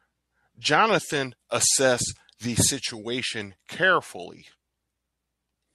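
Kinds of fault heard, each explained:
Sample clock jitter: from 1.05 to 3.58 s, a converter clock wavering near half a microsecond mistimes samples, adding roughness about 35 dB down.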